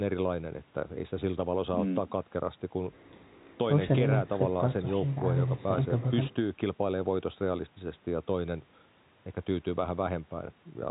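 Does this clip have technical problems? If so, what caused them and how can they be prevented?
No, this clip has no technical problems.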